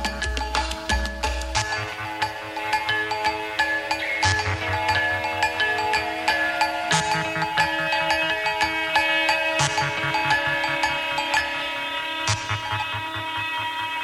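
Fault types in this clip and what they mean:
Sudden gain jump: from 1.06 to 1.24 s, sound and background drop together by about 4 dB, likely from a gain change applied without a ramp.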